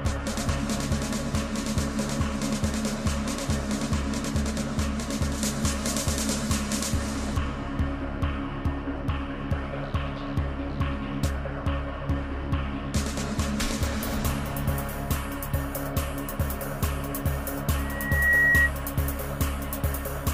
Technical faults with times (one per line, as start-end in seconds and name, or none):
5.38-7.38 pre-emphasis left on
17.77-18.71 loudspeaker feedback squeal